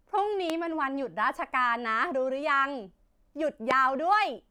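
A speech clip with a loud pop at 0.50–0.52 s and another at 3.71–3.73 s, each a single sharp transient roughly 15 and 20 dB above the speech, which continues underneath. The likely cause is a sudden voltage step, as from a switch, plug contact or static discharge.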